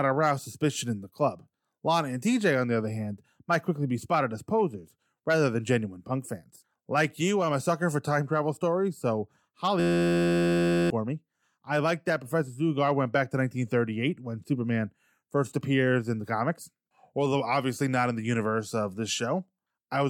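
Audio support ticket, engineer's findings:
System hang loop, 9.80–10.90 s, right after "time travel stories so" and before "me I liked that". Steady 86.1 Hz buzz from an 11.61 ms slice repeating, which fits a 512-sample ring buffer. Computer or driver stalled; about a second of audio lost.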